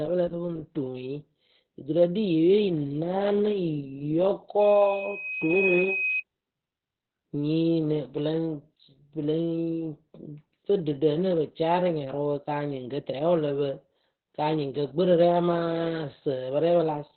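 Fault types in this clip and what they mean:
Opus voice compression: The speech runs through Opus's SILK linear-prediction coder at 8 kbps, narrowband, in 20 ms frames, with nothing above about 4.3 kHz. Coarse excitation coding leaves the speech heavily muffled, hoarse and slightly robotic for the whole clip.
Loudspeaker feedback squeal: A microphone-to-loudspeaker loop with gain above one at 2.5 kHz lets that single tone grow on its own. From 4.60 s it swells over roughly a second to about the level of the speech, then stops at 6.23 s.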